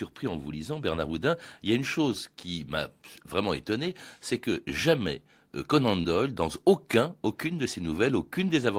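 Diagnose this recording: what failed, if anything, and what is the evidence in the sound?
A short concealed packet loss on the network path: about 20 ms of the speech arrived too late or not at all, and the receiver's decoder covered the hole with roughly 24 ms of synthesised audio, extending the preceding sound before fading back into the real signal. The patch sits between 6.01 and 6.06 s, just before "dans aucun aucune de", and is heard as a brief smear or wobble where the original detail was replaced by a guess.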